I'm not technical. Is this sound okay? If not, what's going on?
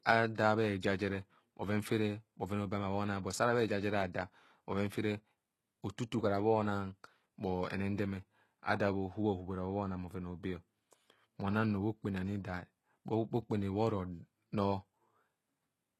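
No, not quite. The speech has a gritty, metallic top end with s sounds turned lispy and nothing in the highest treble, likely from heavy HE-AAC compression. Also, at about 0.35 s a short hiss creeps in just before a sharp sound, lasting roughly 30 milliseconds. That's pre-echo, where the noise smears backward ahead of the attack.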